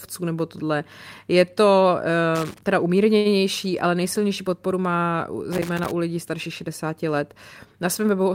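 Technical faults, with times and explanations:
2.35 to 2.61 s and 5.52 to 5.91 s, loose connector crackle: two irregular bursts of crackle and scratching, the second longer at about 0.39 s against 0.25 s. A worn or dirty contact is making and breaking rapidly as it shifts, chopping the signal on and off, with any DC on the line turning each break into a pop. On a spectrogram these show as scattered vertical broadband streaks; the waveform shows jagged spikes and brief dropouts at uneven intervals.
3.17 to 3.27 s, short stall from a late packet: a packet arrived late, the jitter buffer ran dry, and the receiver held the last sound for 77 ms until it came, then carried on from the same point. Nothing is lost, but the sound is stretched and everything after it runs 77 ms later. A spectrogram shows a brief frozen, horizontally smeared patch, and the waveform shows the same short cycles repeating.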